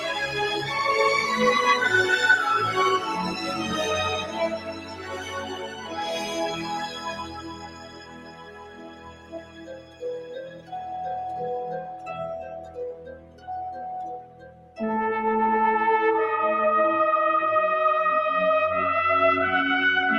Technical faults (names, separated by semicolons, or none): noise suppressor applied to music or sounds; sound cut by the noise suppressor